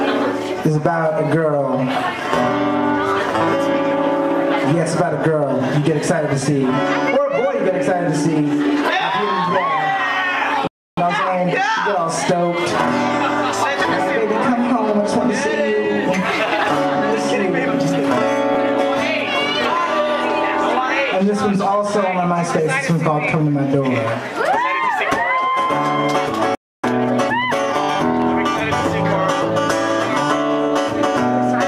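The audio cuts out twice and then hurries to catch up. It also has one brief glitch in between. The first playback stall runs from 10.67 to 10.97 s, a silence of about 0.3 s. The second runs from 26.55 to 26.84 s, about 0.28 s long. In each, the sound stops mid-flow and then resumes. The likely cause is that the player ran short of data or its thread was blocked. Time-compressed catch-up follows each stall. From 10.97 to 11.55 s the audio plays at 1.5 times speed. From 26.84 to 27.96 s it plays at 1.25 times speed. The pitch stays normal, but the pace is rushed. This comes from the player trimming its backlog by cutting out small slices and cross-fading across the gaps. The faster first pass clears its backlog in about half the time. At 18.54 s there is a short smeared, noisy blip lasting 10 ms. This is lost LE Audio frames. The length fits a single missing Bluetooth LE Audio frame. The LC3 decoder filled the gap by reusing the previous spectrum with randomised signs. 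That turns any tonal content into a brief burst of noise. The loss is too short for the gradual fade into silence to set in.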